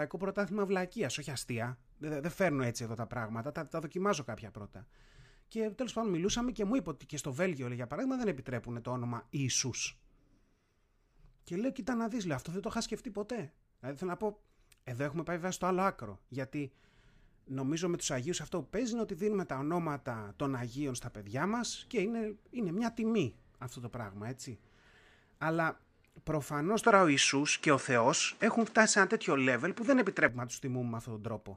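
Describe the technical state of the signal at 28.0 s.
Input switched to a poorer device, 26.83 to 30.29 s: the sound stops near 9.8 kHz, shifts about 5 dB in level and gains faint new noise, likely from another microphone.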